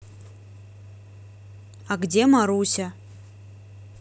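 No technical faults can be heard anywhere in the speech recording. There is nothing in the audio that needs a time mark or an explanation.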